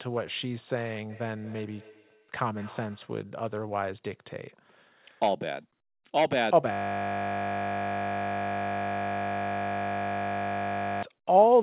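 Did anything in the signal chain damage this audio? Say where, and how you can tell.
Yes. From 1.09 to 3.19 s there is feedback echo between two devices, a call-processing fault. The sound returns roughly every 200 ms, peaking about 21 dB below the speech. Another device's speaker feeds this microphone, and its echo canceller cannot remove that. A spectrogram shows evenly spaced, fading copies of each onset.

From 6.72 to 11.03 s a system hang loop at the driver or buffer stage replays one 20 ms segment about 215 times. This is heard as a steady 50 Hz buzz. The waveform shows one identical period tiling exactly. The spectrogram shows fixed horizontal harmonics at multiples of 50 Hz.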